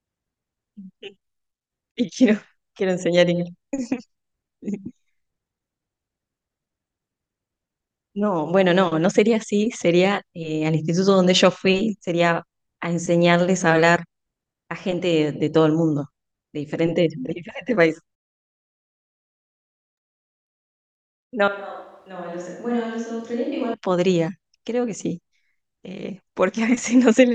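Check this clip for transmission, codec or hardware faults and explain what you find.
One fault stands out, in the speech from 21.48 s to 23.74 s. For just over two seconds the voice abruptly turns roomy and hollow, loses its low end, drops roughly 10 dB in level and sits over a faint wash of room noise, then snaps back just as suddenly. This is a switch to a distant microphone: the close microphone's signal most likely dropped out, so the recording fell back on a pickup farther away that captures more of the room.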